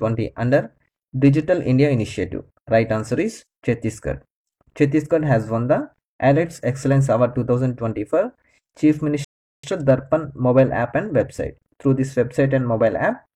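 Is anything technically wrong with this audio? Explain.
Yes, there's one problem. At 9.25 s a rebuffering stall hits: the sound drops out to silence and picks back up at 9.64 s, right where it left off. What's happening is the player burned through everything it had downloaded and had to sit and wait for more data before carrying on. Nothing gets skipped, but that gap adds about 0.39 s of dead air to the timeline.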